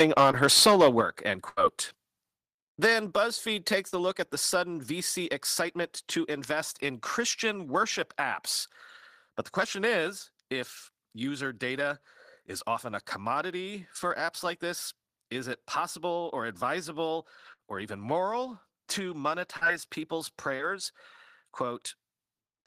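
From 0 to 1.01 s the speech shows microphone overload, likely from input gain set too high. Peaks run about 8 dB past the converter's ceiling and a small share of samples are flattened, giving a harsh crackle on the loudest syllables. At 0.31 s a short concealed packet loss smears about 20 ms of sound into a brief wobble, too short to fade. At 1.01 s the microphone volume is stepped down about 6 dB, a sudden level drop in both voice and background that stays lower, unlike the passing dip of a dropout. From 1.49 to 1.59 s a burst of packet loss leaves an 80 ms gap, filled by a held sound that fades before the audio resumes further on. At 3.11 s the microphone volume steps down again, by about 3 dB. Short concealed losses recur at 3.89, 19.57 and 20.57 s, each a smear or wobble lasting 20 to 40 ms. A second burst at 17.53 s fills a 60 ms gap with a decaying sound, longer and fading where the short losses are not.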